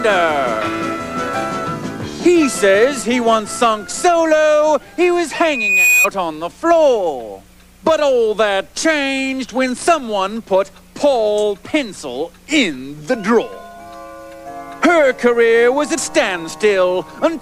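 Loudspeaker feedback squeal runs from 5.33 to 6.08 s. A microphone is picking up the loudspeaker it drives, and at 2.5 kHz the loop gain tips past one, so that frequency feeds on itself. A single tone rises out of the sound over about half a second, swelling into a piercing whistle that ends up around 5 dB louder than the rest of the audio, then stops at 6.08 s.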